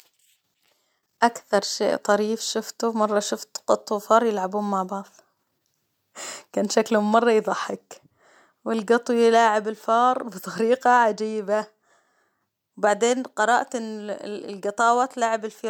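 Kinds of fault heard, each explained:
No faults turn up anywhere in this speech clip, so there's nothing to list here.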